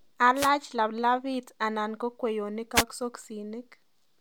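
At 0.35 to 0.50 s, just before "laplapit anan ko kweyonik", and again at 2.74 to 2.84 s, just after it, wireless microphone noise hits: the FM radio link fades, receiver hiss surges into a brief static swish, unlike a digital dropout's clean silence.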